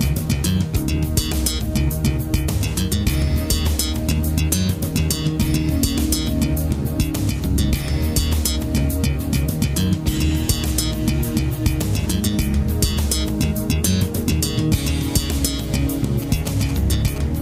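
From 16.22 to 17.18 s, GSM signalling bursts break in near the end. A nearby 2G phone is signalling to the network. The audio circuit rectifies its radio pulses. They sound like galloping ticks and short 217 Hz buzzes, roughly 15 dB below the main sound.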